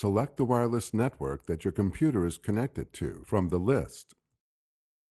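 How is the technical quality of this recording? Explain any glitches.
No glitches can be heard anywhere in the recording. It carries the coding texture of a call codec, with the top end rolled off around 12 kHz, which fits an Opus stream at a moderate bitrate.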